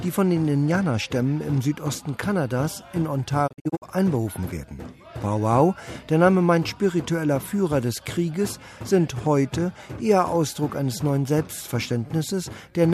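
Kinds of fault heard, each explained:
Digital broadcast dropout: the receiver stopped getting usable frames, either from lost signal or failed checksums, and muted its output until valid data returned. Between 3.46 and 3.84 s the sound drops out in several short holes rather than one gap. Each hole fades down over about 20 ms. The silences total 192 ms across a 336 ms stretch, and the longest is 48 ms, which points to roughly eight lost frames of 24 ms. The audio sent during those holes is gone.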